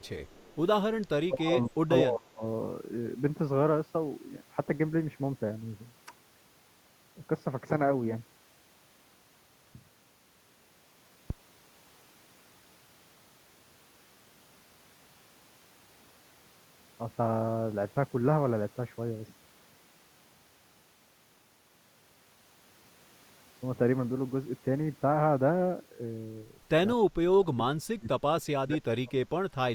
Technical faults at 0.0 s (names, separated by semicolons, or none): echo leak